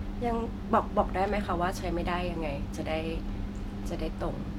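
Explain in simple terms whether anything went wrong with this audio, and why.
Nothing went wrong with this audio, so there is no problem to explain.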